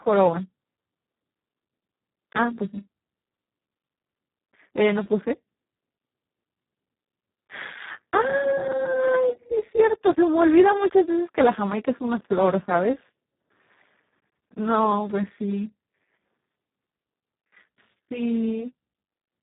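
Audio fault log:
throughout, Speex codec: the speech has passed through Speex at a very low setting, which fits about 4 kbps, leaving almost no bits for the excitation. The result is heavily damaged, hoarse and robotic, with nothing above 3.8 kHz, so the sound is dull and narrowband.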